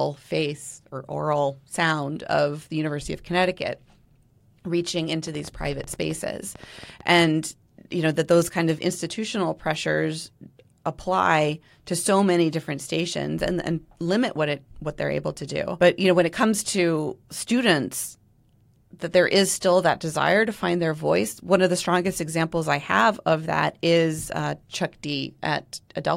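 Speech recording with a train of clicks from 5.27 to 7.22 s: about twenty pulses, irregularly spaced at roughly 9.8 per second, peaking near the level of the speech itself. The ticking is likely caused by interference from nearby equipment or a faulty connection or power supply.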